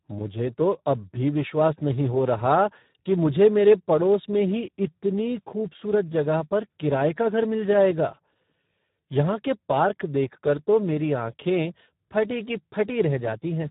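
From start to end, the speech carries heavy Speex codec damage. It sounds noisy and hoarse, which fits an 8 kbps setting. Nothing is heard above 3.8 kHz.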